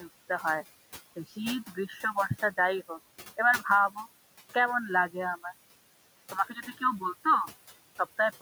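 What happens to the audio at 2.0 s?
Between 1.67 and 2.16 s the noise suppressor cuts part of the speech. It mistakes soft speech energy for steady background and turns it down by up to about 10 dB, so roughly 150 ms of soft speech sounds swallowed. A spectrogram shows faint, ragged patches where speech harmonics should be, and the waveform dips.

Throughout the clip, noise suppressor artifacts lower the noise floor by about 16 dB, frame by frame. On a spectrogram the gaps look blotchy and speckled rather than evenly grey.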